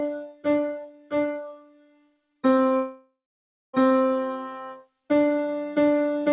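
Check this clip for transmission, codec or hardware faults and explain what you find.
Three faults show up in this clip, heard through a call path whose codec leaves nothing above 4 kHz.

Noise suppressor applied to music or sounds, throughout: a speech-tuned suppressor treats sustained material as noise, swinging the level by about 20 dB, so held sound pumps and thins.

Sound cut by the noise suppressor, 0.14 to 0.47 s and 0.66 to 2.44 s: the suppressor pulls steady stretches down by up to about 21 dB, leaving attacks and shortened, sinking tails.

From 2.76 to 3.75 s the sound turns into a fading continuation of the last sound, then about 0.6 s of silence before resuming further on. This is likely a long network dropout, with the receiver concealing nearly a second of lost audio.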